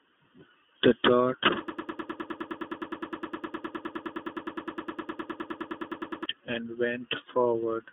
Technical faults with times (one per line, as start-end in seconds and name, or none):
0.00-7.92 channel delay (comb filtering)
0.00-7.92 iLBC codec
1.68-6.26 broken-record loop